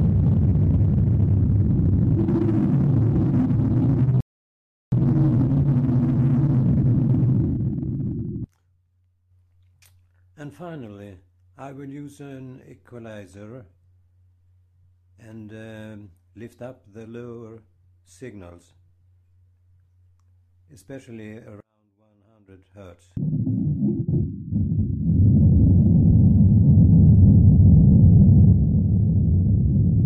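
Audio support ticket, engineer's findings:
Sound drops to silence at 4.21 s, resumes 4.92 s exactly where it left off; nothing missing, about 0.72 s added. Rebuffering stall: player starved of downloaded audio, playback paused until buffer refilled. Component: network delivery / client buffer.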